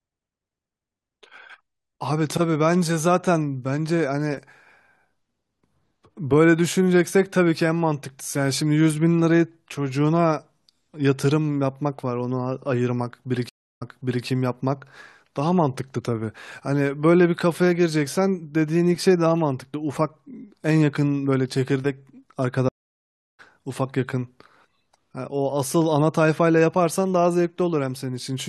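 At 13.49 to 14.26 s a stream reconnect drops the speech for 321 ms; the restarted decoder rejoins 448 ms earlier, repeating material. A second reconnect at 22.69 to 23.40 s leaves 701 ms of silence and resumes about half a second later, skipping ahead.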